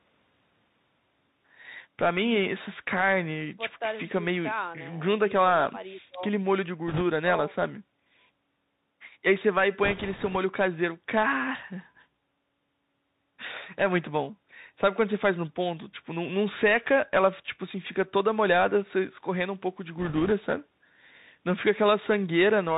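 The whole clip of speech runs through the Bluetooth CVSD headset codec, which fits a 64 kbps headset link. Each sample only nudges the level up or down, so everything above 4 kHz is gone, s sounds come out scratchy, and a grainy hiss sits under the speech the entire time.

Then there are three short stretches of bit errors on the Bluetooth voice link, at 6.88 to 7.03 s, 9.84 to 10.37 s and 19.99 to 20.32 s. The first is the harshest, with a few percent of bits flipped, and the later two are a little milder. Since every CVSD bit weighs the same and errors die away fast, there are no loud clicks, just a rushing crackle laid over the speech.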